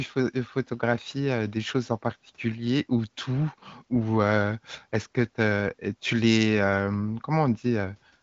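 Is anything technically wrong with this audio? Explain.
No, nothing in this speech recording points to a technical fault. It has the sound of the AMR wideband (HD Voice) codec at about 18.25 kbit/s, with little or no audible coding damage and nothing above about 7.6 kHz, as expected from that path.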